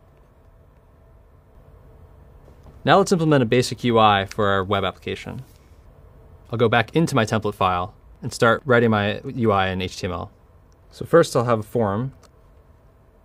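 Nothing in this one trips any alarms; there's no glitch, dropout or distortion to point at anywhere along the way.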